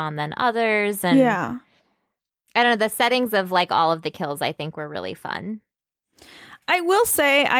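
Nothing stood out as a technical fault on listening to this speech recording.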